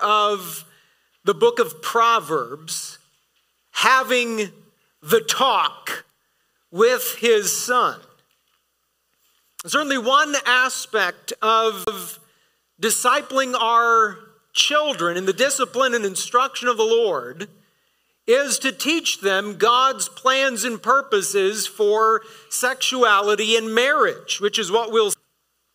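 The audio has two CD skips, at 11.84 to 11.87 s and at 25.13 s: brief mutes, about 30 ms and shorter, where the laser jumped tracks and playback resumed elsewhere.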